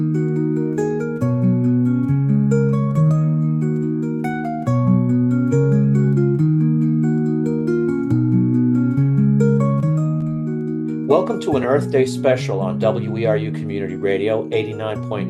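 Lost LE Audio frames at 11.63 s: a gap of about 7.5 ms, which fits a single dropped Bluetooth LE Audio frame. The LC3 decoder had no data for that slot, so it filled it by repeating the previous frame's spectrum with its phase signs randomised. Because the loss is so short, no fade sets in. Any tone there turns into a brief noisy smear, a quick rough blip before the sound carries on.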